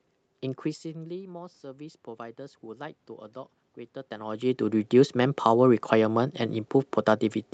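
Twice, right after the talker drops back from the mic, the automatic gain rising kicks in: from 0.62 to 3.05 s it slowly adds about 5 dB, then from 4.09 to 5.88 s about 3 dB, so voice and room noise swell up together.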